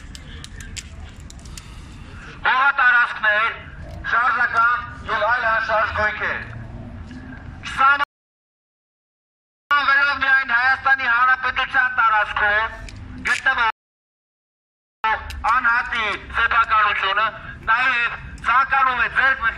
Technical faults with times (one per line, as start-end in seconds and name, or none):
8.04-9.71 rebuffering stall
13.70-15.04 rebuffering stall